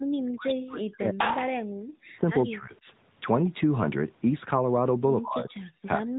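The whole thing has been through the AMR narrowband mobile codec, and it's running at 10.2 kbps, so the damage is plainly audible. Nothing gets through above about 3.8 kHz, which gives that boxed-in phone sound. The codec rebuilds the voice from a vocal-tract model fed by a handful of pulses per short frame, and at this rate you can hear it: the voice comes out buzzy and a bit synthetic rather than natural.

On top of that, the speech keeps getting pushed down in places, most likely speech suppressed in double talk, where an echo canceller couldn't tell the talker apart from loudspeaker echo and turned everything down. The big one runs from 0.2 to 1.77 s, dropping as much as about 40 dB, so the voice nearly disappears in stretches. Shorter dips follow at 2.09 to 2.25 s (about 15 dB), 2.44 to 2.86 s (about 20 dB) and 5.2 to 5.55 s (about 30 dB), each one chopping or thinning the voice.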